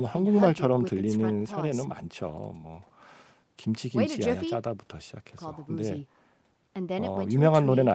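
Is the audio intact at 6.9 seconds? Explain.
Yes, the speech at 6.9 seconds plays through without any dropout, glitch or distortion.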